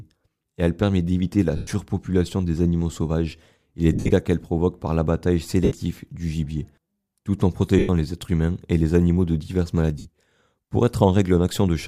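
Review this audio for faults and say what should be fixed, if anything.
Lost LE Audio frames at 1.57–1.67 s after "elle permet d'éviter la", 3.93–4.11 s (scattered), 5.65–5.72 s, 7.79–7.89 s before "les êtres humains et", and 9.99–10.06 s. The decoder refills each gap with a noisy smear of the previous spectrum rather than cutting to silence as a plain dropout would. A stronger Bluetooth link with less interference and a shorter distance between devices would prevent these losses.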